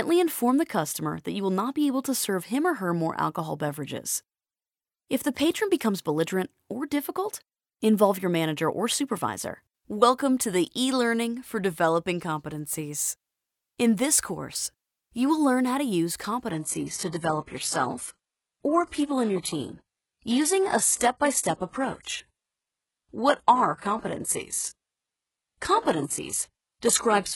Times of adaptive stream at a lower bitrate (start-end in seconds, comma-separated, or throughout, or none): 16.51-27.36